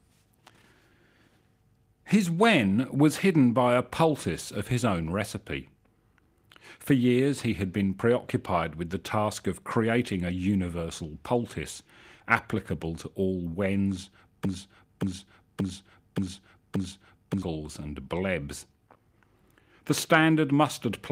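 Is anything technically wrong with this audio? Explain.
Yes. There is a broken-record loop from 14.45 to 17.42 s, right after "applicable to all wens". A fragment of about 0.58 s plays five times, back to back. Each repeat is identical, like a stuck skip. The likely cause is a stall in the player, encoder or stream that kept resending the last piece it held. The audio that belonged in those three seconds is lost. Normal playback returns at "and blebs".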